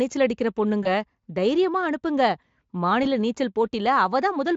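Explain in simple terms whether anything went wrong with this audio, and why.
Two brief glitches, at 0.83–0.88 s and 3.03–3.07 s, are VoIP packet loss concealed by the speech codec. Each gap, roughly one 20 ms chunk, is filled with a smeared stretch of the previous sound, buzzy or noise-like, that fades, not silence or a click, and the speech stays thin for a moment until it recovers.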